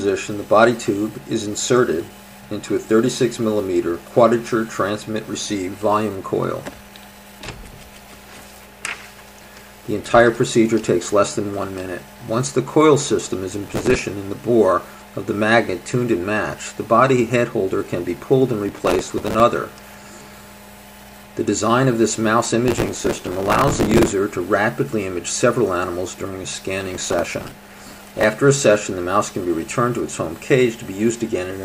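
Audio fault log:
13.64–14.03 s, 18.69–19.40 s, 22.68–24.12 s and 26.81–28.24 s: processor overload crackle. In each burst the processor keeps missing its deadlines, so instead of fresh audio the output repeats old fragments with hard edges, dozens to a couple of hundred times in a row. The grain is very fine, which fits a buffer of about 3 ms. The two longer bursts near the end hold the most misses, roughly 200 and 150. Each stops cleanly once the load eases.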